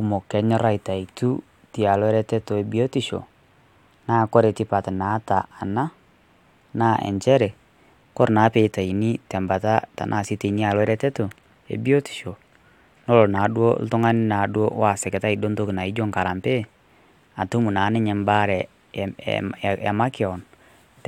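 No faults audible anywhere in the speech recording; nothing to flag.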